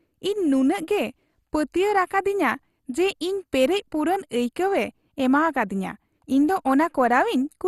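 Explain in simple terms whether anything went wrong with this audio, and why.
Throughout the speech, the sound is dull and gurgling and grainy, with nothing above about 12.2 kHz. This is plainly audible MP2 compression, likely at a low rate: the encoder ran short of data, shut off the upper frequency bands and stored the rest only roughly.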